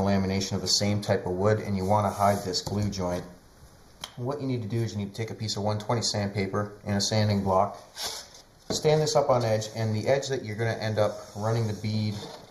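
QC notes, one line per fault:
Throughout, channel delay (comb filtering): hollow, phasey tone with a notch near 3 kHz, as one channel lags about 0.2 ms before mono summing.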